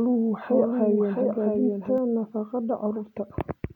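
From the very start of the speech until 1.98 s, a second copy of the same audio trails the first by roughly 0.7 s, about 5 dB quieter, full-band and dry with no decay or room colour, so the sound seems to speak over itself. At 1.98 s the copy cuts out abruptly. This is a doubled audio track, likely from the signal being captured again through a slower path and mixed back in out of step.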